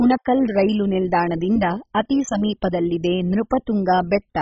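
MP2 compression damage runs throughout this speech clip: the sound is dull, with nothing above 7.5 kHz, and carries heavy gurgling, granular distortion. This points to a very low bitrate, likely near 16 kbps, where upper sub-bands are switched off and the remaining bands coarsely quantised.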